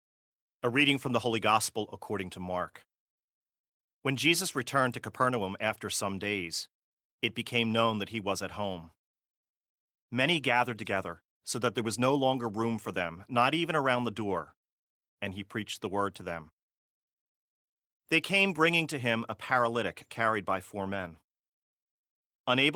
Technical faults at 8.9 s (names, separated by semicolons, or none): none